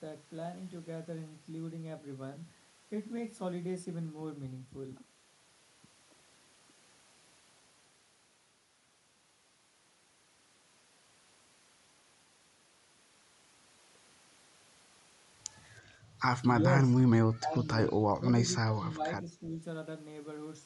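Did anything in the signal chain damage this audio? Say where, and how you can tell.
Yes, in call processing. The speech dips at 17.35 to 17.67 s, 17.97 to 18.28 s and 18.65 to 19.6 s, by roughly 15 to 25 dB. That's likely speech suppressed in double talk: the echo canceller couldn't tell this talker from loudspeaker echo, so it ducked both.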